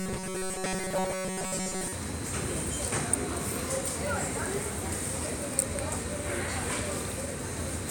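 From 0.005 to 1.93 s there's robotic sound from repeated short buffers: a rigid metallic buzz near 188 Hz, likely from a tiny chunk of roughly 5 ms being looped for most of that stretch.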